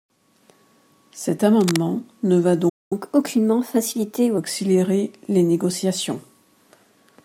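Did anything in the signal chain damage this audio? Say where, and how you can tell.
Yes. From 1.60 to 1.78 s there's cable scratch noise, a dense, uneven rustle sitting about 10 dB under the speech. That's the analogue wiring stage. It's likely a worn connector or cable being moved, so the contact resistance jitters and sprays noise into the signal.

At 2.69 s the speech cuts out dead for about 0.22 s, a playback stall, and picks up again at 2.93 s. This happens at the driver or buffer stage. It's likely the player ran dry or its thread got blocked, so the output just sat silent until data arrived.

Right after that, from 2.93 to 4.38 s, you get catch-up at higher speed. The speech runs 1.15 times fast and sits roughly two semitones high. The player is resampling its backlog to claw back the lost time, then it settles back to normal pitch.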